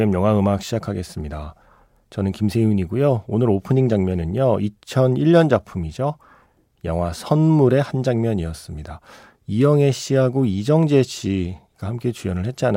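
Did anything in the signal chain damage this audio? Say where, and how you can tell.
No, nothing in the signal chain has left an audible mark on this speech recording. At no point can any stage between capture and playback be heard acting on the sound.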